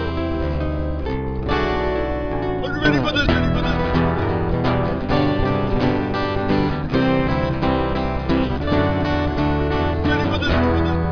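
No technical faults can be heard anywhere in the recording. Nothing in it points to a problem with how the audio was captured or passed along.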